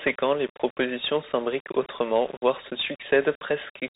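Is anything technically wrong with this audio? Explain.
Yes, two faults run through the whole clip.

Low bit depth without dither, likely the cause, is present from start to end. Samples appear rounded to about six bits with no dither, so the error tracks the signal. Quiet passages turn gritty and grainy, with distortion roughly 20 dB below the speech.

A Bluetooth CVSD headset codec also affects the entire clip. This narrowband codec encodes each sample as a single up-or-down bit at 64 kHz with an adapting step size, which fits a 64 kbps link. Nothing above 3.8 kHz survives, s sounds come out scratchy, and a granular hiss sits under the speech.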